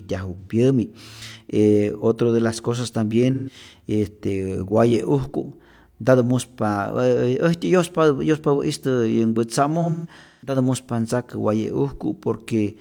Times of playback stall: none

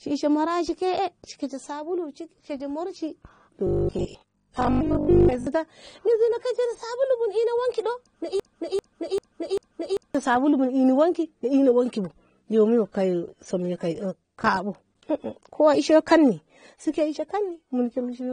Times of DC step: none

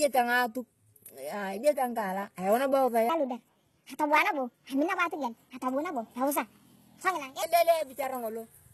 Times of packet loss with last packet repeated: none

